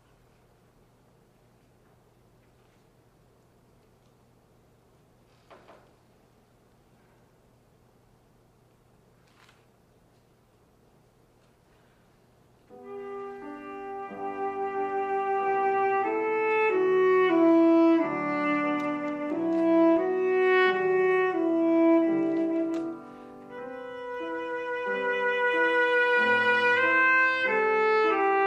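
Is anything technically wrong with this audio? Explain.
Yes. At about 19.97 s there is a dropped buffer (overrun): the software likely failed to read its samples before the hardware overwrote them, so a few milliseconds of audio vanish and the two sides butt together, heard as a small jump forward in the sound.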